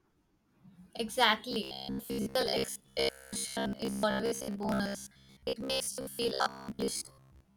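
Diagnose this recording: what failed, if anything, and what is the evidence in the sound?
Robotic sound from repeated short buffers runs from 1.51 s to the end of the speech. The voice hardens into a rigid, metallic buzz near 66.7 Hz that still tracks the words loosely. That pitch implies a chunk of about 15 ms played over and over while most of the real audio is skipped. The likely cause is a driver or buffer underrun in the capture or playback path. A spectrogram would show evenly spaced harmonics locked at 66.7 Hz, and the waveform would show identical 15 ms segments repeating.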